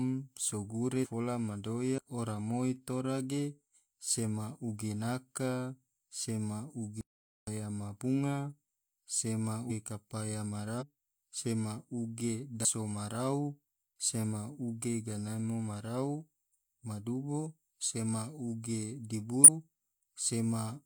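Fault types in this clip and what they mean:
Compressed frames skipped: The speech lurches forward at 1.0, 1.94, 9.66, 10.77, 12.61 and 19.44 s. Each time, somewhere between about 0.15 and half a second of talk goes missing. The jumps come in steps that fit whole compressed frames of about 43 ms. Those frames were missing from the stream or rejected as damaged.
Audio dropout to silence: From 7.01 to 7.47 s the speech cuts out to silence, with no room tone left, and then resumes mid-flow. About 0.46 s of sound is lost outright rather than skipped over. This points to the input signal vanishing while recording carried on writing silence, likely because a device or link dropped out briefly or a mute was triggered.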